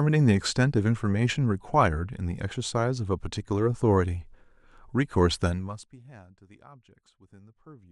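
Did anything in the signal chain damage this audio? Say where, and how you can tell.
Yes. From 5.45 to 5.99 s the speech drops by around 25 dB with zipper noise: a fine, regular ticking at around a hundred steps a second. The gain is being updated once per buffer without smoothing, pointing to roughly 10 ms processing blocks. Unlike crackle, the ticks occur only while the level moves, and unlike a smooth fade, the change is stepped.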